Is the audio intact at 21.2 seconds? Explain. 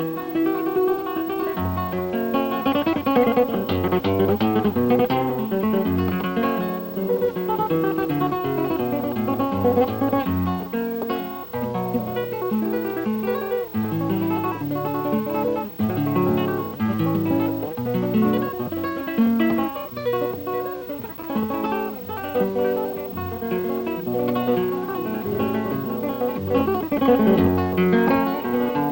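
No. From 21.17 to 21.25 s, a span of about 85 ms, there is loose connector crackle. A worn or dirty contact makes and breaks in quick succession, chopping the signal on and off, and any DC on the line turns each break into a pop. The result is a short, ragged burst of scratchy crackle. Unlike a single digital click or a clean dropout, its breaks are irregular and uneven in level.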